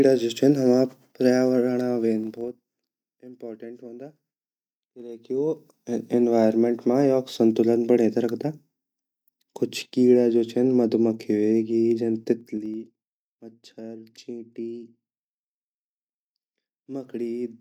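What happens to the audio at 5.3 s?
At 5.3 s you're in the middle of a stretch of zipper noise, from 4.95 to 5.89 s, just before "एनवायरनमेंट मा योक संतुलन". The level changes by about 20 dB in unsmoothed 2 dB steps, around ten a second, so each jump clicks and the speech picks up a zippy ticking.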